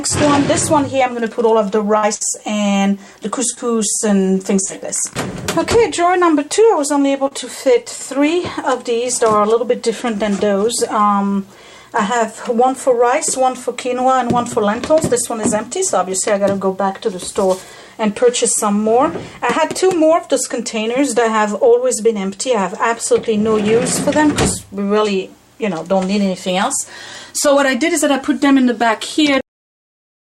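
Bursts of packet loss at 1.97–2.05 s and 2.15–2.23 s drop about 60 ms each. The last sound is stretched into a fading buzz or hiss, seen on a spectrogram as smeared, flattened bands before the audio jumps ahead. At 3.55 s, a short concealed packet loss of about 20 ms leaves a brief smear, a thin blurred sliver in the spectrogram. Another burst of packet loss at 4.65–4.71 s repeats the held, decaying fill, with about 40 ms skipped. At 7.27–7.33 s, a second short concealed packet loss loses about 40 ms and blends back as a small wobble. A cut-off end at 29.41 s stops the audio mid-sound. The waveform falls straight to flat digital silence with no decay.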